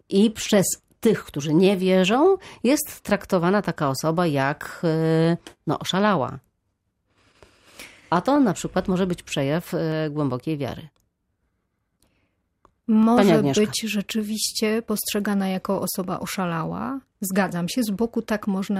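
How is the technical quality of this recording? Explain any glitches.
The recording has one recurring fault. From 0.58 s to 17.7 s, roughly ten clicks recur every 1.55 s over the speech. These are clock drift buffer slips, likely from two clocks differing by around 100 ppm, so the buffer periodically drops or repeats a few samples.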